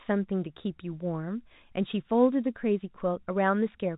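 Nothing stood out on listening; the speech comes across with the narrow, telephone-band character of G.711 coding and nothing further calls attention to itself.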